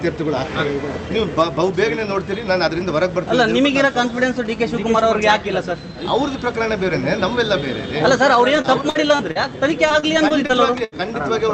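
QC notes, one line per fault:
2.11 to 4.47 s, GSM signalling bursts: galloping dit-dit-dit clusters of ticks and short 217 Hz buzzes, around 20 dB below the sound. These are intermittent groups from a nearby 2G phone that is signalling, not a continuous drone.
4.50 to 6.14 s, GSM phone buzz: a steady, raspy 217 Hz buzz rich in harmonics, about 31 dB below the sound. The phone has gone into a call and now sends its bursts 217 times a second without pause, which explains the unbroken buzz and the absence of gallop.
8.53 to 11.04 s, repeated packet loss (robotic sound): nine dropouts, the longest 77 ms, about 13% of the stretch. Each is patched by extending the previous sound, roughly 300 ms rebuilt in all, so the audio turns choppy rather than buzzing.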